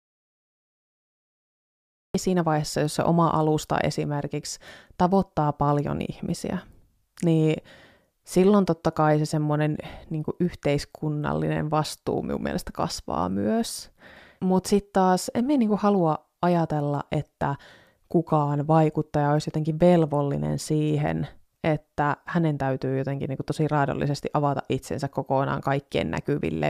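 A speech recording that opens in an audio dropout to silence: from 0 to 2.15 s there is flat silence, a blank spectrogram and flatline waveform, likely from lost input.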